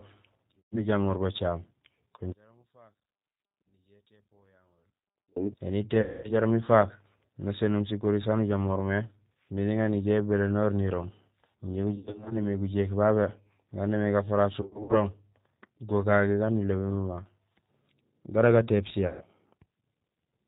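Speech runs through the G.729 codec at 8 kbit/s throughout. Nothing above 4 kHz survives. The voice sounds rough and slightly synthetic, and the damage is plainly audible. VoIP packet loss concealed by the speech codec occurs five times. The first is at 0.60 to 0.85 s, just before "bacaam kun". The others are at 6.01 to 6.32 s, 11.96 to 12.46 s, 14.61 to 14.97 s, just after "gaan némé", and 19.07 to 19.24 s. The decoder stretches the last sound into a fading buzzy tone or coloured noise. Single losses cover about 130 to 230 ms. At 12 s and 14.6 s, short gaps of up to 60 ms are scattered over roughly 0.3 to 0.4 s. From 2.32 to 5.36 s, after "bacaam kun", the voice nearly vanishes. The level drops by about 37 dB. The likely cause is one channel inverted, so the two channels cancel when summed to mono.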